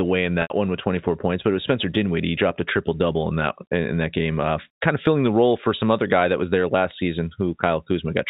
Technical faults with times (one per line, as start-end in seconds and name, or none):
0.42-0.50 packet loss with pitch repetition